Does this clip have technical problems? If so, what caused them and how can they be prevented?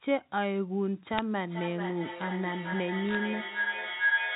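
Yes. At 1.18 s a short burst of sharp ticks cuts through the sound, and a second, longer patch of crackle runs from 3.06 to 3.15 s. These are bit errors on a digital phone line. The call is carried as G.711 A-law, so each corrupted bit alters a single 8-bit sample. When a sign bit or high-order bit flips, that sample jumps far from its neighbours and produces a click. The density points to an error rate of a few bits in a thousand during each burst. Cleaning up the transmission link, for example by fixing a faulty line, connector or interface, or by using a path with error protection, would prevent this.

From 1.46 s to the end, a tone near 1.5 kHz rises over the sound, sitting inside the narrow telephone band. It swells and pulses roughly every 400 ms and peaks at about 2 dB above the speech. This is feedback howl. Two devices in the same room share the call, so the loudspeaker's output returns through a microphone on each round trip. 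That loop gains level each time and narrows onto the frequency it favours, with the pulsing matching the loop delay. Keeping only one device connected in a room, or muting the others, would prevent it.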